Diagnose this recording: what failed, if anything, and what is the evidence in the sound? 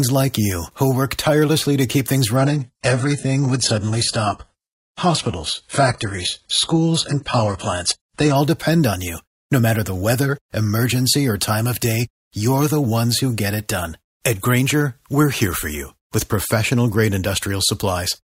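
The failure is in the network stage: an adaptive stream at a lower bitrate. Right after "tirelessly to keep things", at 2.36 s, the speech abruptly turns thin and synthetic, with nothing above 11.1 kHz, and stays that way for six seconds until 8.36 s, just before "depend on you". There's no gap at either switch. That sound points to a drop from around 96 kbit/s AAC to a roughly 12 kbit/s HE-AAC rendition while the connection sagged.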